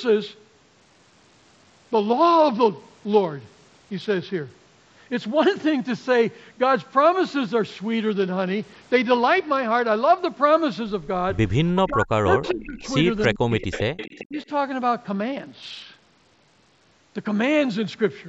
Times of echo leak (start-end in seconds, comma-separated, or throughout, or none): 12.44-12.58, 12.84-12.89, 13.23-13.27, 13.60-14.45